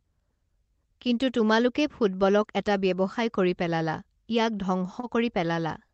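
At 5.00 s the speech hits a short stall from a late packet, lasting until 5.06 s. A packet arrived late and the jitter buffer ran dry. The receiver held the last sound for about 32 ms while it waited, then resumed where it left off. Nothing is lost, but everything after runs about 32 ms later. It sounds like a brief drawn-out syllable with a slight buzz or dip, over the call codec's band limit near 8 kHz.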